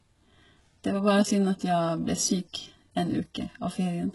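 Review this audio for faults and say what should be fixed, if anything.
Throughout the speech, s sounds come out gritty and metallic, with nothing above 11.4 kHz. This is likely HE-AAC compression, which rebuilds treble by copying lower bands upward. The heavy damage fits a bitrate around 12 kbps. A spectrogram shows smeared, repeated upper-band copies cut off flat at 11.4 kHz. Encode at a higher bitrate, or use plain AAC, so the treble is coded rather than reconstructed.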